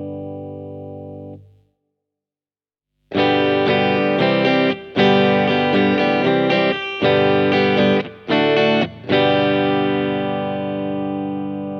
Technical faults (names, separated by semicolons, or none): none